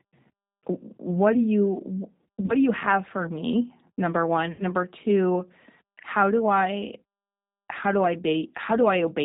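The whole clip runs through a G.729 codec at 8 kbit/s, so everything above 4 kHz is gone and the speech sounds plainly rough and synthetic. Packet loss concealed by the speech codec hits twice. From 2.41 to 2.55 s, between "what do you" and "do you have for", about 40 ms of audio drops out in short gaps, the longest around 30 ms. The decoder stretches the last sound into a fill that fades. Then at 4.52 to 4.63 s, right after "have for me number", 70 ms of lost audio gets the same treatment, and the voice stays weak or distorted for a moment after.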